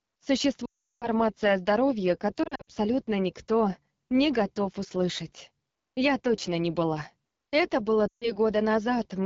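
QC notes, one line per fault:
Throughout: AMR wideband (HD Voice) codec at 8.85 kbit/s, one of the lowest rates, so the speech comes through rough and raspy with plainly audible coding damage.
0.65–1.07 s: lost AMR speech frames, about 360 ms gone before "о здоровье"; the decoder drops to near silence within two frames, then returns weak.
2.43–2.71 s: lost AMR speech frames scattered over 240 ms between "о здоровье" and "никто не готов услышать", runs up to 60 ms, giving brief dips and warbles.
8.08–8.32 s: lost AMR speech frames, about 140 ms missing; held pitch and vocal tract settings with falling gain drop the sound to near silence briefly.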